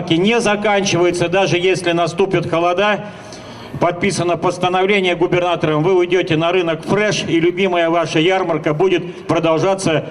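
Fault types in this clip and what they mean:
Overlap between stream segments: timestamps overlap, so a sliver of real audio gets cut, giving tiny skips at 1.12 and 7.12 s, six seconds apart.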